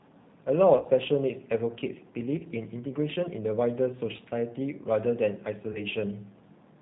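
The whole clip is speech carried through a G.729 codec, and it sounds like the 8 kbit/s G.729A variant: nothing above 4 kHz, and a rough, slightly synthetic edge from rebuilding the voice out of a filter, a pitch predictor and a few pulses per frame. On top of that there's VoIP packet loss concealed by the speech codec. At 0.77 to 0.88 s, about 60 ms went missing across an 80 ms stretch, with the longest gap 30 ms. Shorter drops follow at 2.39 to 2.45 s and 4.17 to 4.22 s, about 20 ms each, and at 5.72 to 5.81 s, about 30 ms. In each spot the decoder keeps stretching its last pitch and filter at falling gain, so you get a brief buzzy or noisy, fading smear, and the voice stays weak or distorted just after until the codec catches up.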